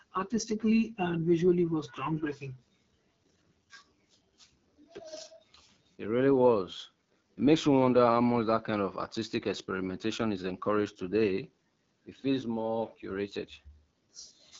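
From start to finish the speech carries the AMR wideband (HD Voice) codec at a low rate. The roughness points to around 8.85 kbit/s, one of its lowest. The vocal tract model is starved of bits, so voices come out raspy and gritty, and the top band is just shaped noise above 6.4 kHz.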